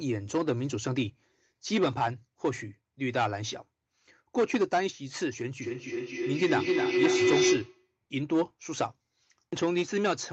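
Hard clipping runs through the whole clip. The speech was driven about 9 dB past what one stage could pass. The loudest peaks hit the ceiling and were cut flat, a few percent of the samples. Those flat tops add harsh harmonics. Inside the 8 kHz band of the Opus call path, they come through as a gritty crackle on the stronger syllables. Every loud moment carries that edge.

Feedback howl starts at 5.62 s and lasts until 7.96 s. A microphone picked up a loudspeaker playing the same call. Each trip round that loop gained level instead of losing it. The sound narrowed to a tone of around 400 Hz that the loop favoured. Its repeats come roughly every 300 ms, the loop's delay. At its loudest it sits about 2 dB above the speech. It stops once the loop breaks.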